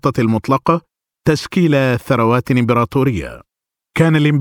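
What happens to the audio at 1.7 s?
Nothing goes wrong at 1.7 s; the speech carries straight through that moment with no dropout, click, distortion or other fault.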